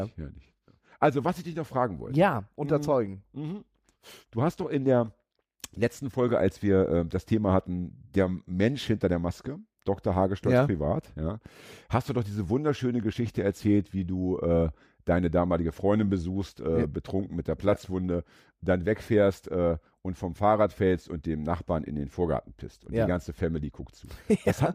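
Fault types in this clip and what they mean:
No technical faults can be heard anywhere in it.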